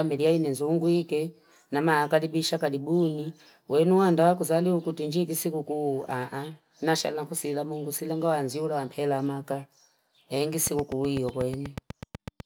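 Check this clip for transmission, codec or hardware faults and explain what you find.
One fault is present, near the end of the speech. From 10.67 to 12.41 s there is a train of clicks: about fifteen similar ticks at a regular 8.1 per second, peaking roughly 10 dB above the speech, likely from electrical interference or a faulty connection or power supply. Their steady spacing and matching shape, continuing through pauses, distinguish them from random crackle.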